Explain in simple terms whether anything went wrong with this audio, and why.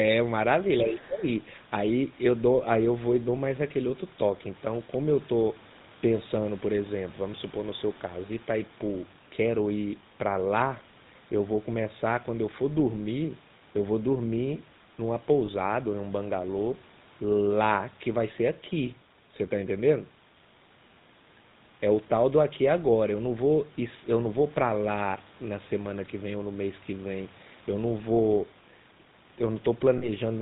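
A few things went wrong.

The whole recording carries the sound of the GSM full-rate codec, the original mobile-phone speech coder. It squeezes the voice into a simple model of the throat and mouth, fed by a coarse train of pulses, and cuts off everything above 4 kHz. That's why the speech has a buzzy, gravelly edge and sounds a bit muffled all the way through. The roughness is obvious here, not subtle.

Right at the start, from 0.81 to 1.06 s, a second, fainter voice slips in underneath. That's the other side's voice leaking through. It sits a good way below the main speech. Most likely the talker's phone was playing the far end on its speaker, and the echo canceller didn't scrub all of it out of the microphone, so a scrap of it got sent along.

Over the same stretch, 0.81 to 1.26 s, the main voice sinks noticeably, losing a fair chunk of its level for about half a second before it recovers. 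That's speech suppressed in double talk. Most likely, with both sides talking at once, the echo canceller couldn't separate the talker from the speaker echo, so it turned everything down. The talker's own speech gets caught in that dip.

There are two brief glitches from lost GSM frames. The first runs from 15.46 to 15.49 s, where one 20 ms frame went missing. The second runs from 29.98 to 30.09 s, where two frames, about 40 ms, were lost. The decoder fills each gap by repeating the last good frame, so what you hear is a short, metallic, ringing smear rather than a clean cut.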